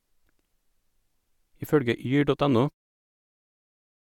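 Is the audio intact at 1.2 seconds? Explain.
Yes, the speech at 1.2 seconds is intact, with no fault at that moment.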